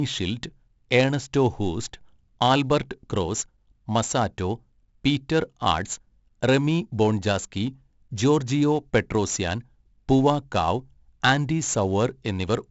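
Throughout the speech, 4-bit ADPCM compression adds a gritty hiss to every loud syllable. Each sample is a coarse step from a prediction, so the noise follows the level. Sharp attacks distort. Nothing sounds above 7.7 kHz, which fits a 64 kbps stream.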